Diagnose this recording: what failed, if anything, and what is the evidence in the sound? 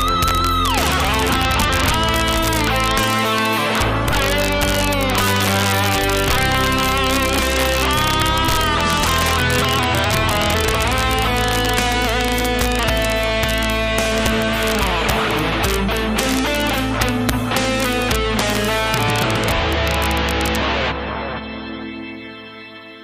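Integer overflow in the fixed-point gain or sample-format conversion stage. It is present throughout. Loud peaks do not flatten as they would with clipping. They snap across to the opposite extreme, and each one is heard as a violent, sharp crack. The signal is driven roughly 5 dB past full scale. Only a small fraction of samples exceed the limit. That is why the cracks sit on the loudest moments, while quieter passages pass through intact.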